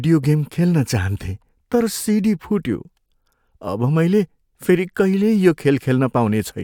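No technical faults can be heard anywhere in the recording.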